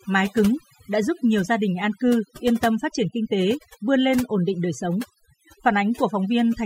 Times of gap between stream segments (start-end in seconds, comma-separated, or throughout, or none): none